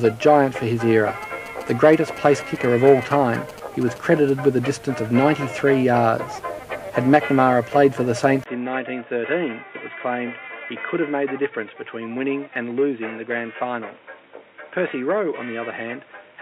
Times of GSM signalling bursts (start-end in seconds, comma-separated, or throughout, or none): 1.22-4.30